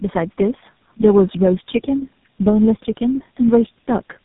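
Throughout the speech there is tandem speech coding. It sounds like several speech codecs in series, about four, the last resembling GSM full rate. Each recodes the previous one's damage, leaving rough, muffled, warbly speech with nothing above 3.8 kHz.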